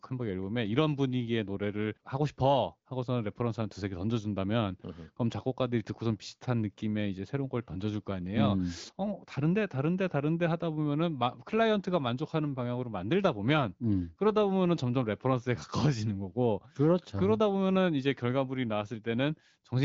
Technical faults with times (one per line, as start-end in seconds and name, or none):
none